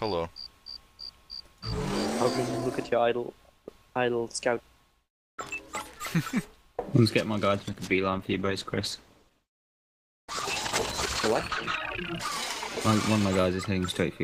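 A call bitrate drop hits the audio from 7.6 s to 11.89 s: the sound turns coarse and watery, with highs cut away, for about 4.2 s. This fits an encoder squeezed from roughly 128 to 12 kbps, and unlike packet loss it has no gaps or clicks.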